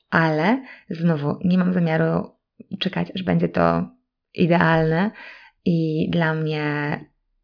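Nothing stood out as a technical fault on listening to this speech recording.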